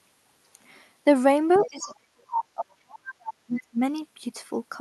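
From 1.53 to 1.95 s, the other side's voice leaking through appears as a second, fainter voice about 15 dB beneath the talker, likely loudspeaker echo the canceller left behind. From 1.64 to 3.8 s, speech suppressed in double talk makes the talker dip by as much as about 40 dB, likely because the canceller turned everything down while both sides spoke. Unlike packet dropouts, these dips track the overlapping voice rather than falling at random. Briefer, quieter scraps of leakage return at 3.06 to 3.13 s and 3.53 to 3.61 s, about 20 and 25 dB down.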